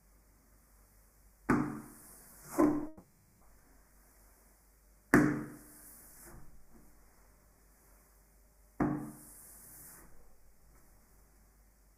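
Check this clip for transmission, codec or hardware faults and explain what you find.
One fault stands out: a long network dropout from 2.87 to 3.43 s. The audio stream likely stopped arriving for about 540 ms, and the receiver bridged the whole gap by extending the last sound it had, so there is no stretch of outright silence. That filler is heard as a smeared, buzzy continuation in place of the real sound. When the audio resumes at 3.43 s, the missing half-second is simply skipped.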